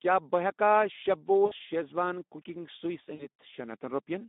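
Right from the start the whole thing carries Speex codec damage, and it's plainly audible. The speech sits in a narrow band of roughly 200 Hz to 3.7 kHz, and with so few bits going to the excitation signal the voice comes across hoarse and grainy. That thin, rough character points to a low-rate setting, something like 11 kbps.

At 1.45 s there's a dropout handled by the decoder's own concealment, which is VoIP packet loss concealed by the speech codec. For about 60 ms, which fits three lost 20 ms frames, the decoder keeps extending its last pitch and filter and pulls the gain down frame by frame. You hear a smeared stretch that fades, and the voice stays a bit weak until around 1.53 s. The same thing happens again at 3.15 s. This one covers about 40 ms of missing audio, so two frames. The sound drags and fades, then recovers by about 3.27 s, a little after the packets come back.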